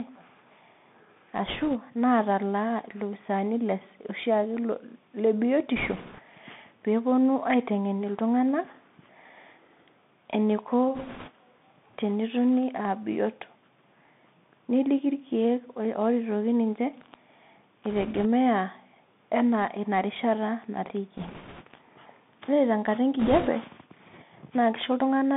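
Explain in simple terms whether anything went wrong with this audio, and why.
The speech sounds thin, muffled and scratchy throughout, with a grainy hiss underneath. That is the Bluetooth CVSD headset codec, which keeps only roughly 150 Hz to 3.6 kHz.

Brief rushing crackles appear at 1.46–1.76, 5.76–6.21, 10.95–11.31, 17.90–18.26, 21.17–21.65 and 23.19–23.49 s. These are bit errors on a Bluetooth voice link, where a few corrupted bits in the wireless signal add noise.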